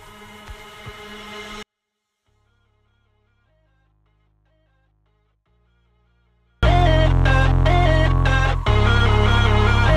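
A 24-bit alignment error makes the sound too quiet from 1.63 s to 6.63 s. For those five seconds the sound stays clean and undistorted but falls by about 48 dB at the instant the fault begins, leaving it barely audible. The cause is a mismatch in how samples were packed and read: 24-bit values sat in the low bytes of 32-bit words, and the reader treated them as full 32-bit integers, so every sample lost its top eight bits of scale.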